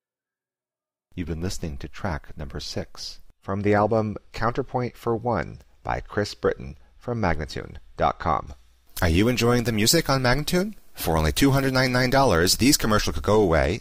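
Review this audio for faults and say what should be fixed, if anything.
From 8.47 s to the end at 13.80 s, the sound turns thin, bright and sibilant, with the top end pushed well forward. This is pre-emphasis left on: a treble boost matching the FM 75 µs curve was applied ahead of recording or transmission, but the complementary de-emphasis cut never followed, leaving 10 kHz about 14 dB high relative to 1 kHz. Applying the matching 75 µs de-emphasis filter over that section would fix it. To prevent it, confirm that every stage adding pre-emphasis is paired with the correct de-emphasis before the signal is stored or passed on.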